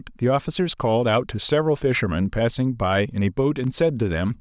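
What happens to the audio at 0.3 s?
Nothing goes wrong at 0.3 s; the speech plays through that moment cleanly, with no dropout, click, glitch or distortion.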